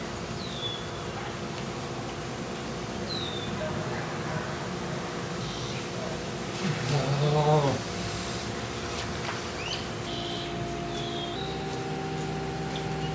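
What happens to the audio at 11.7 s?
At 11.7 s the audio is inside a section at the wrong speed, which runs from 11.36 s to the end of the clip at 13.15 s. That stretch plays 1.12 times too fast, likely from being fitted to the wrong clock, so pitch rises by about two semitones and everything sounds hurried. On a spectrogram, the harmonic bands step up by about 12 percent at 11.36 s and events crowd closer in time. The waveform's envelopes look compressed.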